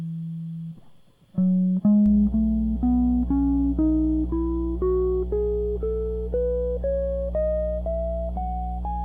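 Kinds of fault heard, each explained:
Mains hum: power-line coupling adds a 60 Hz tone from 2.06 s to the end, nearly as loud as the music; a fixed pitch, not broadband rumble.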